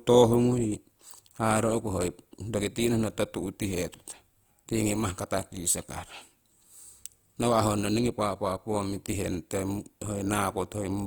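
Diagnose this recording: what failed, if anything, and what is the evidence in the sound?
The failure sits at the codec stage: Opus compression, likely in its CELT music mode, runs through the whole speech clip. The damage is plainly audible throughout, with a grainy, rough texture on the voiced sounds instead of swirling holes. Bandwidth stays full, with content reaching about 20.2 kHz. The encoder keeps each band's energy but fills starved bands with folded or noise-like content, which is what roughens the tone and fits a low rate around 24 kbps.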